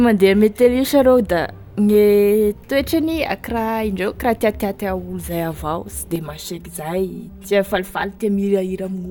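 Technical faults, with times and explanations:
6.16–9.11 s, channel delay (comb filtering): one channel arrives about 5 ms late, so mixing to mono cancels shared content at evenly spaced frequencies, first near 100 Hz, giving a hollow, phasey tone. A spectrogram shows fixed, regularly spaced dark horizontal stripes.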